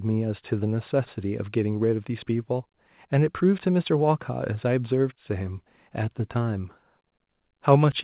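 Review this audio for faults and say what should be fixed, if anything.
Nothing stood out on listening to this speech clip, so there is nothing here that needs fixing.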